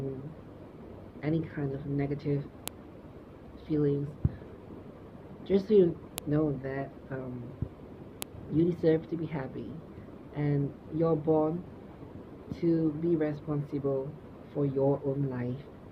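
File header played as audio, at 2.68 s, 6.18 s and 8.22 s: separate WAV pieces were joined without stripping their headers, so those few dozen header bytes play back as samples. Each one gives a sharp, loud click at a piece boundary, regardless of the surrounding sound.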